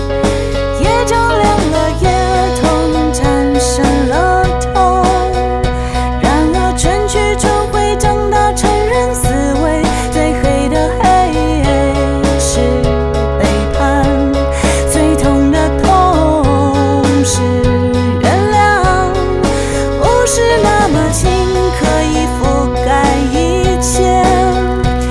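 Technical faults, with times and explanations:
23.64–25.1 s: resampler restarted on every block, each 40 ms block converted alone from 48 kHz to 24 kHz, leaving edge errors heard as a 25 Hz ticking buzz.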